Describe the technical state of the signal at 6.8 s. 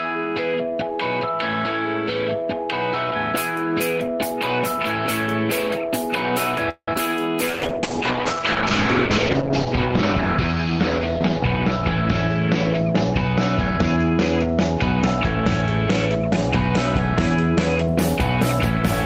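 A call audio freeze runs from 6.69 to 6.89 s, likely from packets stalling in transit until the jitter buffer emptied. The last sound is stretched into a fading buzz, then about 70 ms of silence, before playback resumes exactly where it stopped, now 181 ms later, with nothing lost.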